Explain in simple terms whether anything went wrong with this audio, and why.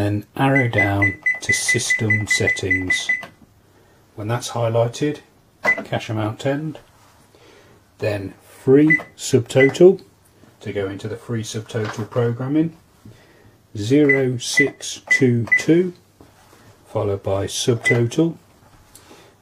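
Nothing went wrong with this audio that a listener can hear.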